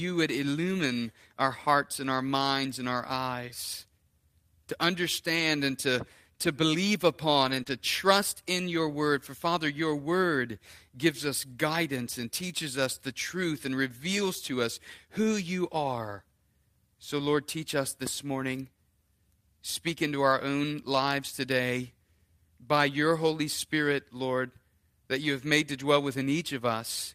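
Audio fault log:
0.81–0.83 s, lost packet rebuilt from error correction: a 20 ms rougher, noisier patch with no gap. A single lost packet was likely replaced by the low-bitrate copy carried in the next one.
5.35–5.41 s, lost packet rebuilt from error correction: about 40 ms of grainy, noisier sound, which fits two packets rebuilt from their lower-quality redundant copies.
7.43–7.61 s, lost packet rebuilt from error correction: a longer rough, noisy stretch of about 100 ms, consistent with five lost packets filled in from coarse error-correction copies.
7.63–7.67 s, short concealed packet loss: a brief smear, as if the sound wobbles or hangs. About 20 ms never arrived, and the decoder extended the preceding sound to cover it before blending back.
7.67–7.69 s, lost packet rebuilt from error correction: another 20 ms of coarser, noisier sound right after the smear, where one more packet was played from its low-bitrate backup copy.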